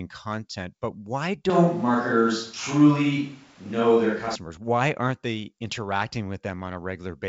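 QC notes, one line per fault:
1.50–4.35 s, switch to a distant microphone: right after "content but why" the speech abruptly turns roomy and hollow with thinner bass, and room noise rises to roughly 35 dB below the speech while level barely changes. Likely the close microphone dropped out, leaving a farther pickup that captures more room reflections.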